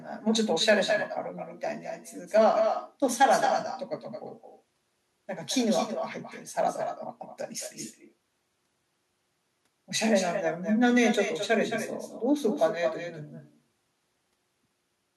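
Echo with no canceller runs through the whole of this speech recording. Every phrase is trailed, roughly a fifth of a second later, by a second copy about 8 dB quieter and thinner than the original. The far end is evidently playing the call over a loudspeaker, and its microphone is catching that playback and sending it back across the network with nothing in the path to subtract it. The round-trip delay is what separates the copy from the original.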